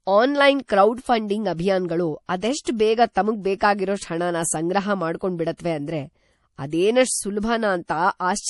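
Throughout the speech, nothing sounds above 11.5 kHz. The audio has a plainly watery, swirling quality, and the treble is dull. The likely cause is MP3 compression. Its level of damage points to a low bitrate near 48 kbps, where weak frequency lines flicker between frames.

From 2.64 to 2.67 s, a short hiss runs ahead of an attack for about 25 ms. This is pre-echo. The codec spread its noise over a whole block, so noise meant for the loud onset leaked into the quiet moment before it.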